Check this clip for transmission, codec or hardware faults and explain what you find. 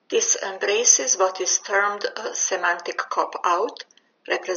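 No transmission, codec or hardware faults can be heard in this speech clip. The only background is the room noise picked up by the microphone, sitting about 45 dB below the speech, which belongs to the recording itself.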